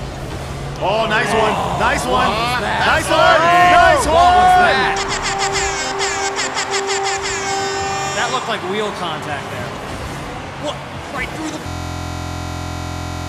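At 11.68 s a system hang loop begins and runs to the end of the clip. The computer or its audio driver stopped supplying new audio, but the sound hardware kept replaying its buffer. The same 23.22 ms slice repeats exactly, dozens of times, which fits a 1024-sample buffer. Because the loop is so short, it fuses into a steady buzz at about 43.1 Hz rather than a stutter.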